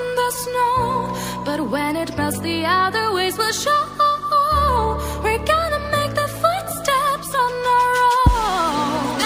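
Imaging from linear upsampling runs throughout the clip. The rate appears to have been raised by joining neighbouring samples with straight lines, which fits a 24 kHz source brought up to 48 kHz. That crude interpolation barely filters, so the top of the original band sounds dulled, and a mirrored copy of the spectrum sits between 12 and 24 kHz, roughly 25 dB below the signal. It comes across as a faint metallic shimmer over the brightest parts of the sound.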